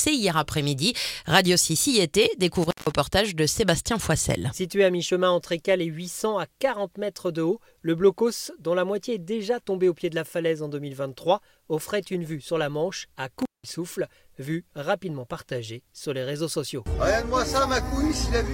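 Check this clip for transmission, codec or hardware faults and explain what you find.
Two brief dropouts from intermittent contact. At 2.63 to 2.92 s and again at 13.39 to 13.71 s, the sound crackles, then cuts out almost completely, leaving only faint hiss for about 160 ms and 183 ms respectively, before crackling back in. The cause is a loose cable or plug whose contact opens momentarily. The scratchy make-and-break at each edge produces the crackle, and the open line passes only background noise.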